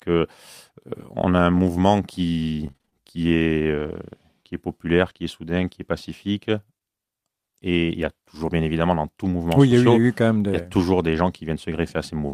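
At 1.53 to 1.59 s, two separate packets were lost, a lost packet rebuilt from error correction. The following packets carried low-bitrate copies, so the decoder filled about 40 ms without a gap, but that stretch sounds grainier and noisier than the surrounding speech. On a spectrogram the harmonics there look smeared and the noise floor rises slightly, while the waveform stays continuous.

From 2.67 to 3.89 s there is repeated packet loss with a robotic sound. Six holes open in quick succession, the longest 31 ms, and the decoder patches each by extending the last sound. In total about 120 ms went missing and roughly 12% of the span is synthetic, with around 20 ms rebuilt from error-correction copies. It comes across as choppy, with pieces missing. On a spectrogram it appears as repeated blocks of frozen, overly regular harmonics, and the waveform shows flattened, looping cycles.

Right after "qui est", from 5.09 to 5.11 s, a single 20 ms packet was rebuilt from error correction and sounds briefly rough. 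It is followed at 5.13 to 5.17 s by short concealed packet loss, just before "est soudain qui est". Here 20 ms never arrived, and the decoder synthesized about 16 ms by continuing the last sound, which produces a brief smear. The spectrogram shows a short patch of continued sound rather than a dropout.

From 5.17 to 5.19 s, just before "est soudain qui est", another 20 ms packet was rebuilt from error correction, adding graininess.

At 6.79 to 6.82 s, a second short concealed packet loss fills a 20 ms hole and is heard as a brief wobble. In the waveform it shows up as a short continued stretch with no gap.

At 11.14 to 11.16 s, one more 20 ms packet was rebuilt from error correction. It gives a momentary roughness, visible on the spectrogram as a thin column of extra noise.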